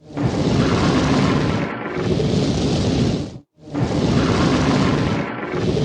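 There are no technical faults to describe at any point in this audio.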